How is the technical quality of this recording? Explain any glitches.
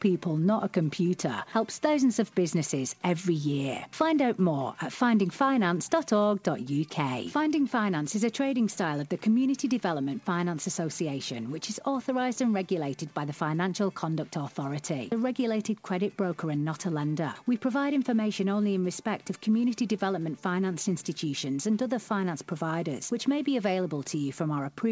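There aren't any glitches to explain here: the audio has the familiar character of a call line, with nothing above 8 kHz, which fits a G.722 link at 64 kbps, and nothing else stands out.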